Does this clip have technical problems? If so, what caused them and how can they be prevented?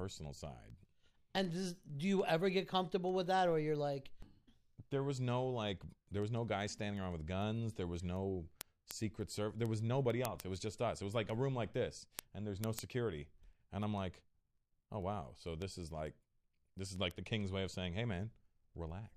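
Yes. The receiving device ran on its own clock, not locked to the sender's and off by something like 150 ppm, so each clock slip dropped or repeated one sample. These word clock ticks are sharp clicks about every 0.15 s, roughly 150 of them, from 0.11 s to 19.05 s. Lock the receiver to the incoming digital signal or to a shared word clock.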